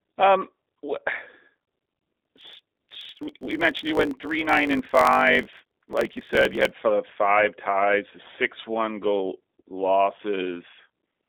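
G.729 codec damage runs throughout. The speech sounds rough and synthetic, as it is rebuilt from pulses at what sounds like 8 kbit/s, with nothing above 3.7 kHz.

From 1.53 to 6.72 s, a block size mismatch (truncated) discards each block's tail. This causes a 50 Hz buzz and speech 1.16 times fast with its timbre unchanged, ending before "five ties the six".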